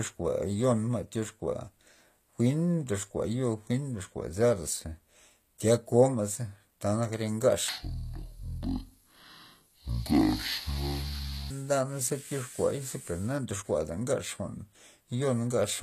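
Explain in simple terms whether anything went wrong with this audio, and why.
HE-AAC compression, throughout the speech: the treble sounds gritty and lispy, likely because the upper range was rebuilt from copied lower tones rather than kept.

Section at the wrong speed, from 7.68 to 11.51 s, right after "tya koma'za tanak re": the audio plays at about half speed, so it drags and sounds roughly ten semitones deeper, likely from a wrong playback clock.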